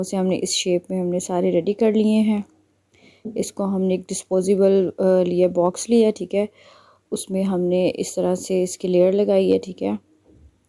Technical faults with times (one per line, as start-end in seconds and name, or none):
none